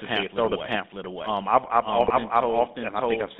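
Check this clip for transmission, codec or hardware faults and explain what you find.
Three problems stand out: the whole clip has a second copy of itself running behind, it's been through an old GSM phone codec, and there's a burst of decoder damage just after the two-second mark.

The doubled audio track runs the full length. A second, full-band copy trails the original by roughly 0.7 s at about the same loudness, so every phrase gets an echo with no decay and no room colour, just a clean repeat. The likely cause is the same speech being captured twice, once through a slower path, or an edit that left two copies out of step and summed them.

The GSM full-rate codec is present throughout, and its damage is plainly audible. The line band sits between 200 Hz and 3.7 kHz, so there's no air or sibilance on top and thin lows underneath. The codec models the vocal tract and excites it with sparse, regularly spaced pulses that keep only a fraction of the excitation detail. 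That's where the buzzy, gravelly edge on the voice comes from, and it fits the 13 kbps full-rate scheme.

The GSM bit errors hit from 2.00 to 2.14 s. Corrupted bits reached the decoder, and the sound suggests a handful of consecutive frames got hit. When the filter, pitch or gain parameters arrive wrong, the decoder rebuilds a bent spectrum or a sudden level jump. You hear it as a short squawky, gargling break with a pop or two before the speech recovers. That's typical of a weak radio link.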